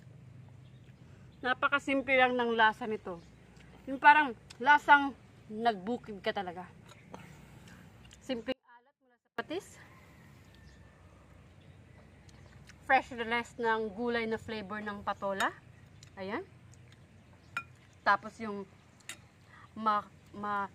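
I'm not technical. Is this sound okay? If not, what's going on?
No. At 8.52 seconds the sound suddenly cuts out and only returns at 9.38, leaving a gap of almost a second. During that gap you can still hear a very faint trace of it, far quieter than normal, rather than true silence. This is an audio dropout to a faint residue. The likely cause is that the signal was briefly lost while the rest of the recording chain stayed switched on, so only a whisper of the sound leaked through.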